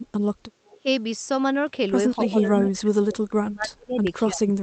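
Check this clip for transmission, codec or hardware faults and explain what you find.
Two echo-canceller problems stand out in this speech, carried over an Opus call path whose audio stops at about 8 kHz.

Echo leak: from 0.66 to 0.78 s, and again from 2.24 to 2.28 s, a copy of the talker returns 268 ms late, likely because a loudspeaker-side canceller let some of its microphone pickup through. The first copy is faint, roughly 30 dB down; the second is much stronger. On a spectrogram it shows as a ghost of earlier harmonics.

Speech suppressed in double talk: from 0.77 to 0.87 s the voice dips by up to around 15 dB, and from 2.17 s to the end it sinks far deeper, up to roughly 35 dB. The likely cause is a canceller turning everything down while both sides talked. The waveform envelope visibly collapses.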